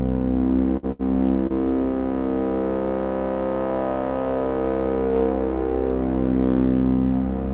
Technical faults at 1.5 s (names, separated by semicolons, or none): short concealed packet loss